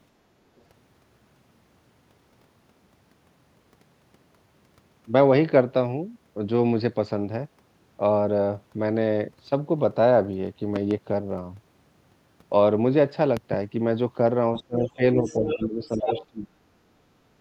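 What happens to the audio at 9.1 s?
Nothing goes wrong at 9.1 s: the speech continues cleanly through that moment with no dropout, click, distortion or other fault.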